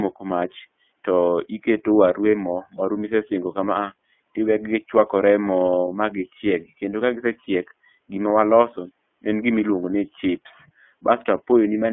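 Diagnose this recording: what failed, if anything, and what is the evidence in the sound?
iLBC codec, throughout the speech: the codec stage confines the audio to roughly 200 Hz to 3.4 kHz and leaves it slightly rough and synthetic. Each frame's excitation is coded independently, and the plainly audible coarseness points to the 30 ms, 13.33 kbps mode.

Lost iLBC frames at 2.31 s and 7.44 s, each a 30 ms gap: the network dropped packets, which fits one lost frame each time. The decoder filled each gap by repeating the last pitch cycle blended with noise, heard as a brief held buzzy vowel before clean recovery.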